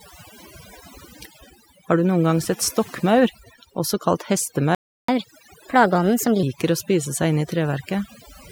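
Overdone noise removal runs through the whole speech clip. The reduction is set too hard. Frequency bands near the noise floor are pulled down or cut, and quiet parts of the voice go with them. Pauses fall to near silence with twinkling specks.

At 4.75 s, right after "sett stokkmaur også kalt", a playback stall cuts the audio. Everything goes silent for 0.34 s, until 5.08 s. Then the sound resumes. The likely cause is a player that ran out of data or was blocked.

From 5.08 s to 6.43 s comes catch-up at higher speed. The player works off its backlog at 1.25 times normal speed by resampling. Pitch rises by about four semitones, so the voice sounds hurried and higher. At 6.43 s speed and pitch drop back to normal.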